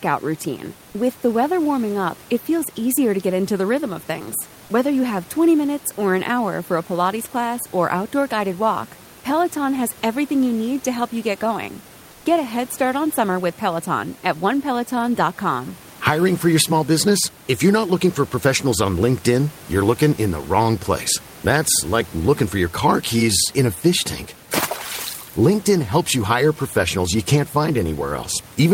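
A speech recording where, from 12.11 to 12.25 s, the room noise briefly gives way to comfort noise in place of the background: about 140 ms of flat, featureless hiss, roughly 2 dB quieter, likely discontinuous transmission in an Opus-style codec filling the pause with synthetic noise.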